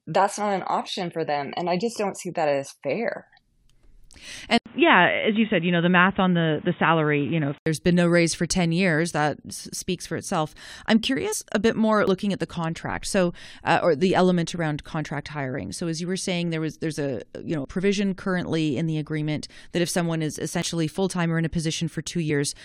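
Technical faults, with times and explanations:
4.58–7.66 s, input switched to a poorer device: the sound turns dull and boxy after an 80 ms gap, with a narrower band and new background noise about 30 dB below the speech at much the same level. The likely cause is a change of input to a narrower-band microphone or headset profile, which then switches back.
11.32 s and 22.29 s, compressed frames skipped: the audio jumps ahead by about four 21.3 ms frames (roughly 100 ms) and then by about one frame (roughly 20 ms).
12.07 s, 17.65 s and 20.62 s, dropped buffer (overrun): each time an abrupt jump, with no silence, as roughly 50 ms of audio is lost and the two sides are spliced together. This likely comes from samples not being collected before the hardware overwrote them.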